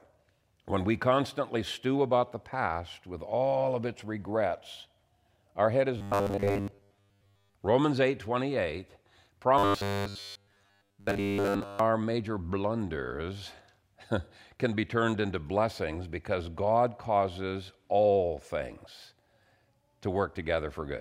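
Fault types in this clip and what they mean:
Robotic sound from repeated short buffers: speech turns into a fixed 100 Hz metallic buzz, likely a 10 ms chunk looped over skipped audio, rather than falling into silent gaps.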